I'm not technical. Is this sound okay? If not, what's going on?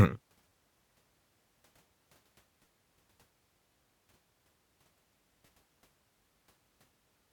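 No. The speech has three tiny stutters, at 0.49 to 0.51 s, 2.66 s and 5.46 to 5.48 s. This is a repeated buffer. New audio came late, so the player replayed its last 11 ms slice.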